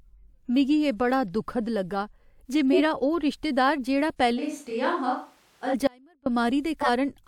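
At 2.72 to 2.79 s, right after "दुखद लग्गा जे" and before "ओह् रिश्तेदार जेह्ड़ा", a short squeaky burst of misplaced energy cuts across the speech for about 70 ms. This is a corrupt frame decoded: bits in a few compressed frames were damaged, and the decoder played them anyway. Misread gains and codes scattered energy into frequencies where it doesn't belong for the length of the damaged frames.

From 4.39 to 5.73 s, following "ओह् रिश्तेदार जेह्ड़ा", the voice abruptly turns hollow and roomy. It loses low end, drops by about 5 dB, and takes on a layer of room noise well below the speech. It then snaps back just as suddenly. The likely cause is a switch to a distant microphone, with the close microphone's feed missing and a farther one standing in.

At 5.87 s the sound cuts out abruptly for 390 ms, until 6.26 s. The gap is not silent: a faint trace of the signal, roughly 30 dB down, remains. 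The hard edges at both ends rule out a pause or a fade. This is an audio dropout to a faint residue, likely the wanted signal being lost upstream while the path after the break stayed live and carried only that leak.

At 6.81 to 6.88 s another brief blip appears, a second corrupt frame decoded. This time a single damaged frame was played with misplaced energy.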